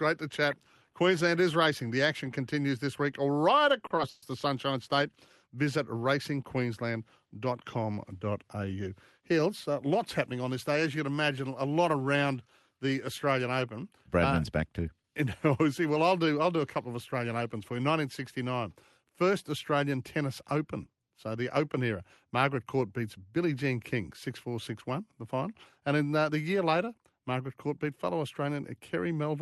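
Just after "continues this week right", from 3.79 to 4.24 s, the speech drags and stutters through four short holds, the longest 130 ms. These are repeated stalls (stutter): late packets left the jitter buffer empty, so the receiver extended the last sound, filling 190 ms, about 42% of the span. From 9.20 to 10.49 s, leading into "this day", the speech runs about 6% faster at unchanged pitch. After "uh back", from 14.79 to 15.04 s, it briefly hurries at about 15% faster. Both are jitter buffer speed-up: an overfull buffer trimmed pitch periods, roughly a tenth of a second and then about half that.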